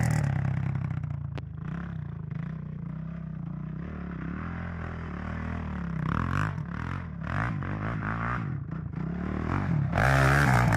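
At 1.38 to 1.41 s there is a single loud pop. It is a sharp, brief pulse that peaks roughly 10 dB above the surrounding sound. The sound continues underneath it. The likely cause is a sudden voltage step, from a plug, switch, static discharge or driver glitch.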